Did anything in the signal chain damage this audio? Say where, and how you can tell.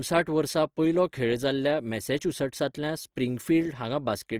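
Yes, at the codec stage, and it runs the whole clip. The speech sounds grainy and rough throughout, with a hashy texture on the harmonics rather than the swirly, watery holes you'd get from MP3, so this is likely Opus compression in its music (CELT) mode. That encoder preserves each band's energy but, short of bits, fills the detail with folded or noise content. Bandwidth stays full, reaching about 20.2 kHz, and the damage is plainly audible, which points to a lean rate around 24 kbps.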